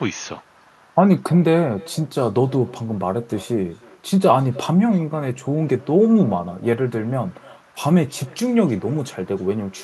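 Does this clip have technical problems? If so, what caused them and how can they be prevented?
Yes. Throughout the speech there is an echo with no canceller: each phrase is followed, roughly a third of a second later, by a faint, thin copy of itself, about 26 dB below the direct sound. The far end is playing the call through a loudspeaker, its microphone picks that playback up, and nothing subtracts it, so the signal returns after the network round trip. Enabling acoustic echo cancellation at the far end, or having that party use a headset, prevents it.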